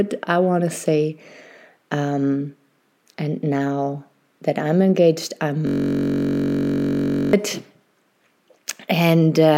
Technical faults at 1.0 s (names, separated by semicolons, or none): none